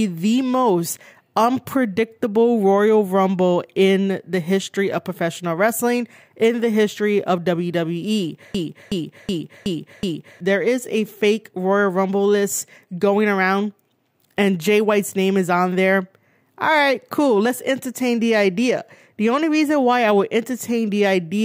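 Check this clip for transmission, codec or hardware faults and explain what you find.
One hardware-side fault is present, a system hang loop from 8.55 to 10.40 s. The system or its audio driver froze while the sound hardware kept replaying its ring buffer, so a 0.37 s slice of speech repeats five times at 2.69 Hz, fitting a 16384-sample buffer. The result is a machine-gun stutter, with about two seconds of real audio lost.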